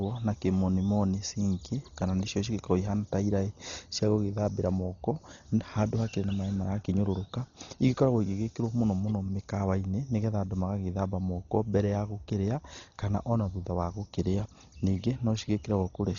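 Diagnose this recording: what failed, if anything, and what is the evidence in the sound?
The speech sounds dull and band-limited throughout, with nothing above 6.9 kHz and a rough, fluttering noise clinging to voiced tones. That points to the codec stage, likely heavy Dolby Digital compression at a bitrate around 32 kbps, where starved frequency lines are refilled with dither noise.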